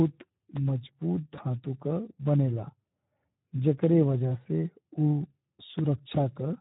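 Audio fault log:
Throughout: Speex codec. The speech is hoarse, grainy and noisy the whole way through. The codec damage is plainly audible. A CELP coder like Speex rebuilds each frame from a predicted pitch and spectral envelope, and here it has too few bits to describe the excitation well. Detail is lost and noise fills in. The noisiness and hoarseness fit a setting near 11 kbps, a middle-to-low quality mode.
0.57–0.59 s: loud pop. A single sharp pop lasts about 20 ms, sitting roughly 15 dB above the surrounding speech. The speech carries on underneath without a break. A brief voltage step or pulse has been added to the signal, and the circuitry after it shapes that jump into a short click. The likely cause is a plug, a switch, static discharge or a driver glitch.
1.35–1.40 s: VoIP packet loss concealed by the speech codec. For about 50 ms the speech smears into a buzzy tone or coloured noise that fades. 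The missing stretch is 20 ms, which fits a single lost frame. The decoder covered the gap by repeating its last pitch and filter at falling gain. Each frame builds on the one before, so the distortion lingers for a few tens of milliseconds after audio resumes.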